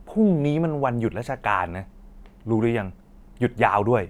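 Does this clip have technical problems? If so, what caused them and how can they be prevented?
No, there are no technical problems in this recording.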